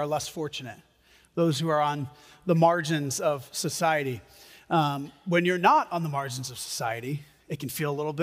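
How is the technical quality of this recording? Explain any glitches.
The technical quality of this recording is good, and there are no glitches to explain.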